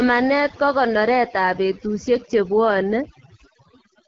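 Right from the start and all the way through, there's overdone noise removal. The reduction was set too hard, so it switches off bands it mistakes for background along with the quieter bits of the speech. That leaves near-silent gaps with twinkly specks.

The AMR wideband (HD Voice) codec is also running for the whole clip, and its damage is plainly audible. The speech comes across rough and raspy, which fits one of the lowest rates, around 8.85 kbit/s, and nothing gets through above about 7.2 kHz.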